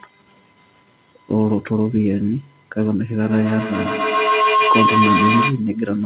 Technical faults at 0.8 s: none

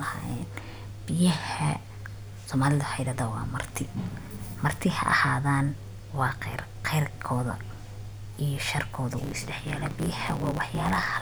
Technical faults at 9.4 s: block size mismatch (truncated)

